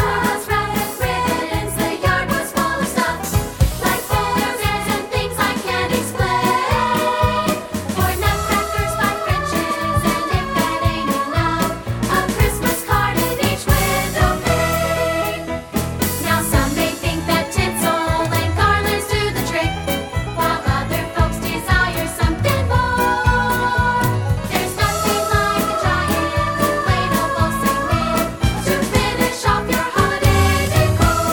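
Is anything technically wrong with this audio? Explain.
No, nothing technically wrong.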